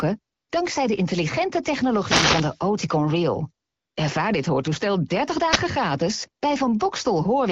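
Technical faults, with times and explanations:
0.35 to 0.49 s, AMR comfort noise: for about 140 ms just before "dankzij de intelligente" the phone sent no speech frames, and the receiver filled the gap with smooth, synthetic noise shaped from a rough level and spectrum estimate. Unlike a radio hit, it is steady and featureless, switching in and out.
1.85 to 2.61 s and 5.46 to 5.61 s, wireless microphone noise hit: the analogue FM radio link faded as reflected signals cancelled, so receiver noise surged into a swishing burst of static over the sound. The first, right after "dankzij de intelligente", lasts about 0.76 s. Unlike comfort noise, the hiss is rough and unsteady.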